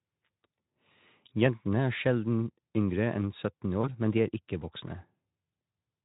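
At 3.81 s, VoIP packet loss concealed by the speech codec: one lost 20 ms frame is extrapolated from the previous pitch and filter, giving a brief buzzy or noisy smear that lingers to 3.88 s.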